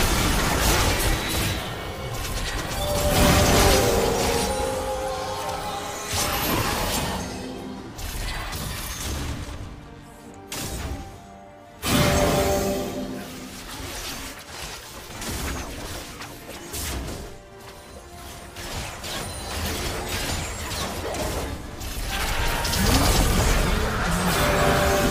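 No technical faults are audible.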